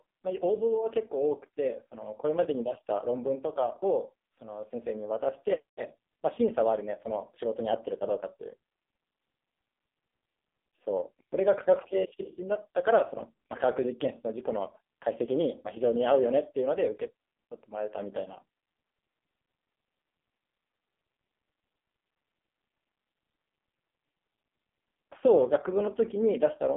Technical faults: AMR narrowband mobile codec

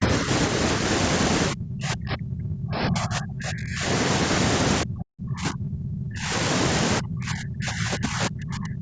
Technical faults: speech suppressed in double talk

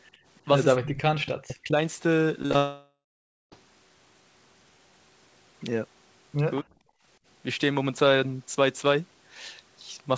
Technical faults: echo leak; speech suppressed in double talk; short concealed packet loss; long network dropout

